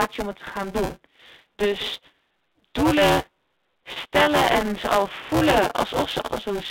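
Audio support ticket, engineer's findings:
Buffer tearing, throughout. Writer and hardware reader on the ring buffer have slipped and cross inside every period, so roughly a third of each period replays audio about 10 ms old with hard joins either side. Symptom: continuous robotic buzz at 200 Hz, which fits a period of about 5 ms. It is heard only while there is signal. It sits on top of the narrow telephone-band G.711 line.

Packet loss with pitch repetition at 0.86 s, 3.92 s and 6.3 s. Gaps of 20 ms, 40 ms and 20 ms, consistent with one or two lost 20 ms packets each. The receiver's concealment repeated the last pitch period to fill each hole. Symptom: brief held, buzzy tone where the sound should move on. The 40 ms gap at 3.92 s is the longest.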